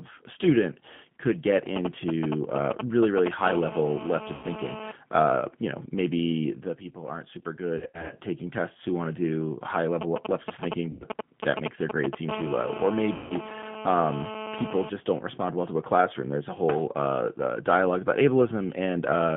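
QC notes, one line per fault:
throughout — G.729 codec: the band runs only from 200 Hz to 3.4 kHz, and the speech has a rough, slightly synthetic texture, consistent with 8 kbit/s G.729A. It differs from a plain band-limited line because the roughness comes from resynthesis with sparse pulses, not from filtering.
4.35–4.48 s, 7.78–8.15 s, 10.91–11.04 s, 13.16–13.33 s — VoIP packet loss concealed by the speech codec: in each gap the decoder stretches the last sound, and it fades out. The gaps last about 80, 180, 100 and 140 ms, which fits losses of four to nine 20 ms packets. Between "the people aren't super" and "taking tests who want", the loss is scattered in short runs over about 320 ms. Unlike a dropout, these gaps don't fall silent, and the audio stays weak briefly after each one.
12.29–14.90 s — GSM phone buzz: a hard, raspy 217 Hz buzz with many harmonics sits at about 12 dB below the speech. 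It ends just before "don't respond well to". It stays steady, as during a call, and has no link to the speech. That steadiness and its rasp distinguish it from a smooth mains hum at 50 or 60 Hz.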